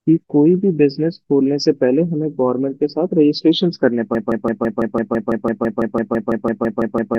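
From 4.15 s to the end, the speech locks into a broken-record loop: one 0.17 s fragment repeats 18 times, likely from a stalled player or stream. It sounds like a rapid stutter, and the spectrogram shows identical blocks tiling at 0.17 s intervals.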